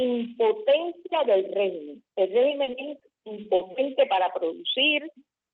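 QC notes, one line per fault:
2.63–3.74 s, repeated packet loss (robotic sound): across this stretch you get a string of short dropouts, about seven of them, the longest around 40 ms. Each hole gets papered over by stretching the previous bit of sound, so roughly 14% of that second is concealment rather than real signal. The close spacing of the patches is what gives it that choppy, robotic edge. Top end stops near 8 kHz, which fits a call codec around 32 kbps.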